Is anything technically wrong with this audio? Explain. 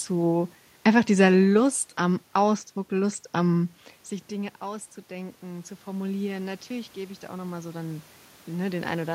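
Yes. From 4.3 s to the end at 9.1 s, automatic gain rising: after the talker moved away around 3.5 s, the input fell by about 15 dB, and the gain control slowly added about 8 dB to compensate, so voice and room noise swell together.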